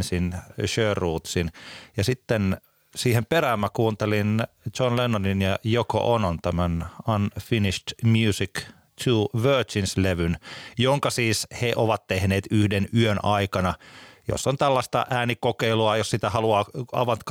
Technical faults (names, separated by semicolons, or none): none